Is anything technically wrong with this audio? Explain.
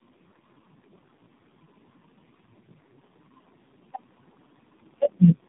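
Yes. Throughout the clip, the speech shows tandem speech coding. It seems to have passed through several low-rate speech coders in a row, each re-encoding the previous one's already damaged output. The errors stack, leaving it rough, muffled and warbly, with nothing above 3.8 kHz.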